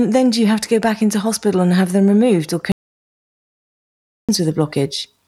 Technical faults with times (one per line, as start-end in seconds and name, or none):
2.72-4.29 audio dropout to silence